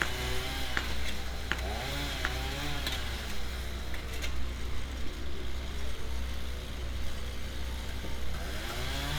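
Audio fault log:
Nothing wrong turns up anywhere in this one, so there's nothing to log.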